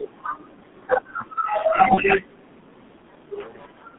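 From the start and throughout, the speech carries the heavy damage of the G.723.1 codec. The line is confined to roughly 150 Hz to 3.6 kHz, and the coarse coding, which fits the 6.3 kbit/s mode, leaves the voice muffled and hoarse, with consonants smeared. That steady roughness across every syllable separates it from a simple band-limiting filter, which would dull the sound without adding the rasp and blur.

At 1.94 s, VoIP packet loss concealed by the speech codec takes over until 2.04 s. The decoder bridges the gap by repeating its last pitch and filter state at falling gain, so the sound briefly stretches and fades. The gap itself fits a single lost 30 ms frame, but the damage lasts closer to 95 ms, because each following frame rebuilds from the degraded state. Unlike a dropout or click, there is no silence or sharp edge.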